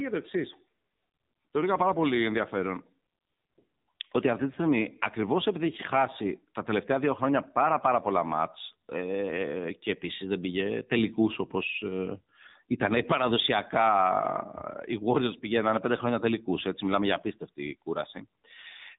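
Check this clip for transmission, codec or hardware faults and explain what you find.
One codec fault runs through the whole speech clip. AMR narrowband mobile codec: nothing above 3.8 kHz survives, so a spectrogram shows a flat ceiling there with empty space above. Coarse pulse-driven vocal-tract modelling in 20 ms frames makes the voice plainly buzzy and synthetic, which fits a low bitrate mode around 7.4 kbps.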